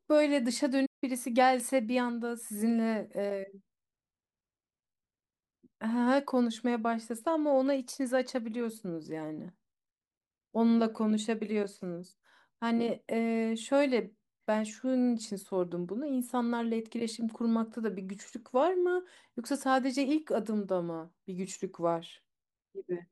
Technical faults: playback stall

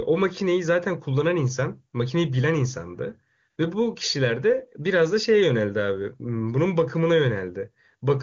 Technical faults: none

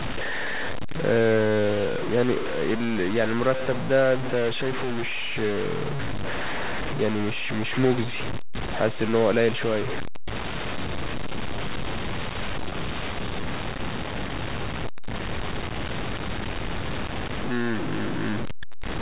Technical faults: low bit depth without dither

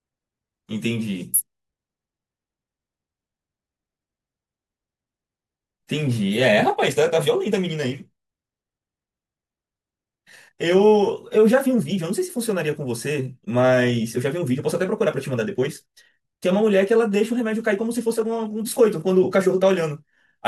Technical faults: time-stretched section

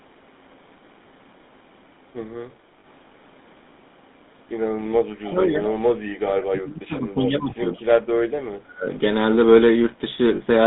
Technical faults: GSM full-rate codec; lost GSM frames; speech suppressed in double talk; echo leak

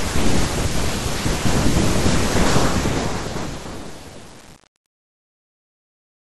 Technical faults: DAB burbling; truncation distortion on a fade

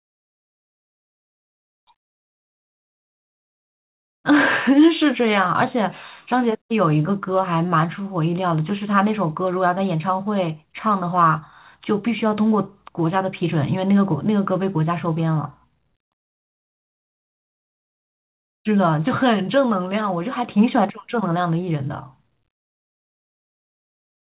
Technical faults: none

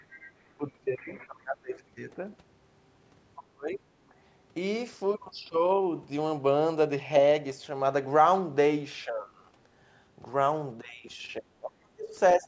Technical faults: other side's voice leaking through; speech suppressed in double talk

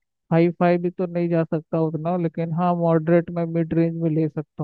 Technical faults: drift correction step

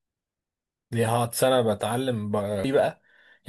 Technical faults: damaged data in a compressed stream

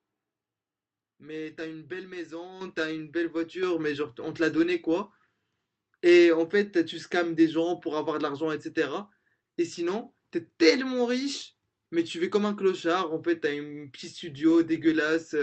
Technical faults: microphone volume stepped up

